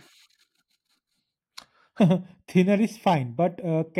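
Channel delay with comb filtering sets in at 1.99 s in this speech clip and lasts to the end at 4.00 s. One channel arrives a fraction of a millisecond after the other, and when the two are summed to mono, what they share cancels at evenly spaced frequencies. The first notch falls somewhere around 1.5 kHz, with further notches repeating above it, so from that point the speech turns hollow and phasey.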